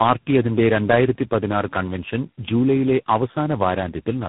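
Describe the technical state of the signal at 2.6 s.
At 2.6 s, as throughout the clip, the speech shows tandem speech coding: it passed through GSM full rate, AMR-NB at 6.7 kbit/s and G.726 at 24 kbit/s, each re-encoding the previous codec's errors. The result sounds rough, muffled and warbly, with nothing above 3.8 kHz.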